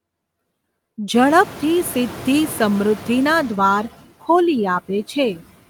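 From start to finish the speech runs through noise suppressor artifacts. The suppressor is pulling down whatever bands it judges to be steady noise, frame by frame, by about 16 dB, so the background dips in the gaps and swells back up under each phrase. The room noise jumps by about 24 dB at around 1 second, leaving it only about 18 dB under the speech.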